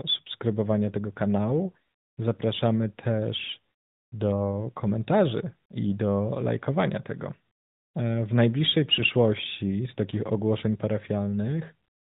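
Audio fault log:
8.96 s, lost AMR speech frames: just after "w najbliższej" one 20 ms frame of the speech drops out and is briefly patched over with a dip or warble. The frame failed its checksum after radio errors. The decoder then rebuilt it from the last good pitch and vocal tract settings at reduced gain. A single lost frame is too short to fade to silence. The speech then returns, weak or rough for a moment. Being AMR narrowband, with light codec damage, nothing above 4 kHz is heard.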